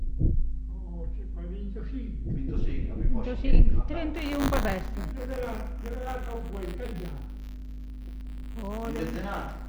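From 4.15 s onward, buffer tearing splices a small sliver of audio about 20 ms old into each period: a 100 Hz rattle that, unlike hum, vanishes in silence.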